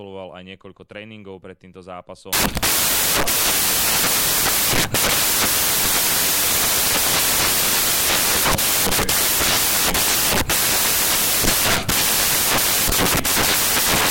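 From 2.33 s to the end of the speech, the audio collapses into loud, hissing white noise: samples built from the wrong bytes. The reader is assembling each sample with its bytes misaligned or swapped, so the rapidly changing low-order bits land in the most significant position. What distinguishes this from ordinary added noise or clipping is that the hiss is derived from the signal itself rather than sitting at a constant floor.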